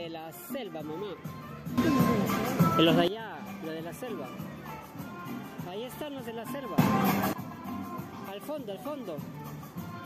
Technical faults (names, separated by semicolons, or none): sudden gain jump